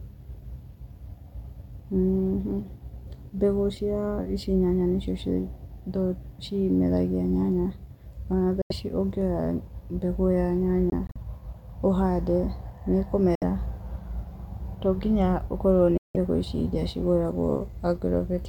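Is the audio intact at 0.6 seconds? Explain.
Yes, the audio is intact at 0.6 seconds, with no fault at that moment.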